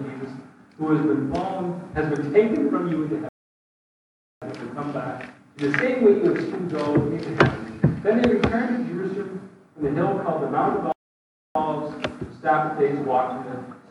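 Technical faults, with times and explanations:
3.29 to 4.42 s, playback stall: the sound cuts out mid-flow for about 1.13 s, then resumes, likely because the player starved of data or its thread blocked.
10.92 to 11.55 s, playback stall: a second silent gap of about 0.63 s interrupts the audio before it picks up again, likely from the same buffer underrun or blocked output.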